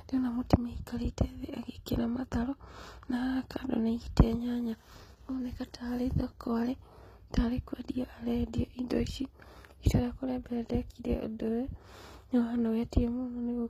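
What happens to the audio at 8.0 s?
At 8.0 s the speech carries the same damage heard throughout: gritty, lispy s sounds and a synthetic-sounding treble, likely from HE-AAC compression at a low bitrate around 20 kbps, where the upper band is rebuilt from copied lower bands. A spectrogram shows repeated patch-like texture up top and nothing above 14.9 kHz.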